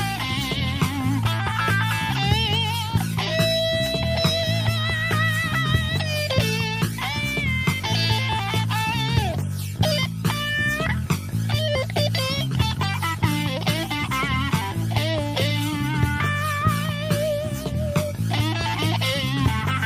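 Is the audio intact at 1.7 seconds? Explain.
Yes, the audio is intact at 1.7 seconds, with no dropout, click, distortion or other fault at that point.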